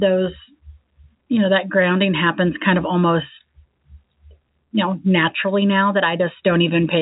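No technical faults are audible.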